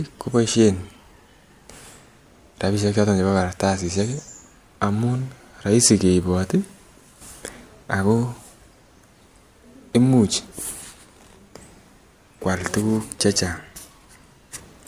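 No faults are audible anywhere in the recording.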